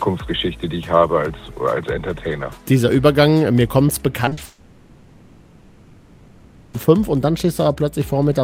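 Short concealed packet loss hits three times in quick succession: 4.25 to 4.29 s, 4.29 to 4.33 s, and 4.33 to 4.39 s, with about 20, 20 and 40 ms of audio missing. Each time the receiver had nothing to play and patched the gap by extending the preceding sound before blending back into real audio. Strung together, these patches are heard as a brief smeared, wobbly stretch just past the four-second mark.

A long network dropout follows almost immediately, from 4.45 to 6.75 s, most likely from packets failing to arrive over the connection for that whole span. About 2.28 s of audio is gone. The receiver fills all of it by carrying the last sound forward as a buzz or hiss that fades into a low, steady noise rather than true silence. Real audio resumes after 6.75 s with that stretch missing.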